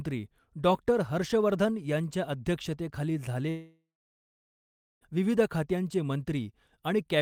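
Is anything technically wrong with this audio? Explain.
Yes. From 3.49 to 5.03 s the speech breaks off: the last sound smears into a fading buzz, then about 1.15 s of near-silence follows, and speech resumes with roughly 1.5 s missing. This is likely a long network dropout, with the receiver concealing lost packets.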